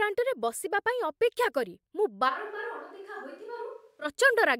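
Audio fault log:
2.30–4.04 s, switch to a distant microphone: just after "କରି ମୁଁ" the speech turns abruptly roomy and hollow, with thinner low end and a drop of about 10 dB, and it snaps back just as suddenly at 4.04 s. The likely cause is that the close microphone's feed dropped out and a far-placed pickup carried the signal, capturing more reflected room sound and a noise floor around 35 dB below the speech.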